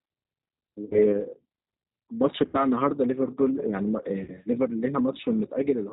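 Speech carried over a G.729 codec at 8 kbit/s sounds band-limited below 4 kHz, with a rough, synthetic grain that separates it from simple low-pass dullness. VoIP packet loss concealed by the speech codec occurs at 0.85–0.99 s, 2.48–2.59 s and 4.24–4.35 s, where about 60, 60 and 40 ms went missing. Instead of silent gaps, the sound stretches into a fading buzzy tone or coloured noise and then recovers weakly.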